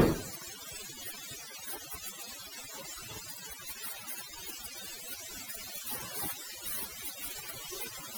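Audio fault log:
Throughout: overdone noise removal. A noise reduction stage set too strong suppresses individual frequency bands whenever they sit near its noise estimate, taking quiet speech detail with them. The background drops and breaks up into twinkling specks. On a spectrogram, the gaps between speech look darker, dotted with isolated bright flecks, and the speech itself shows a patchy, holed texture.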